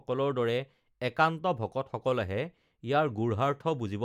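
No technical faults can be heard in the speech here. The audio stays steady throughout, with nothing that disturbs it at any point.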